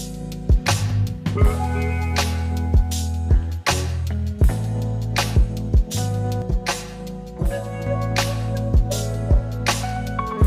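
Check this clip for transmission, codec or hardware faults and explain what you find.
One fault is audible. Channel delay (comb filtering) from 6.42 to 7.87 s: one channel lags about 5 ms, and the mono sum cancels evenly spaced frequencies from roughly 100 Hz up, sounding hollow and phasey.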